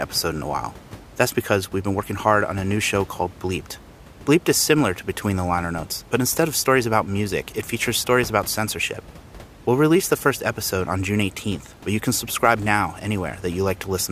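No system faults are audible in the speech; the only thing under it is the room's own background noise, sitting about 21 dB below the voice level as part of the original recording.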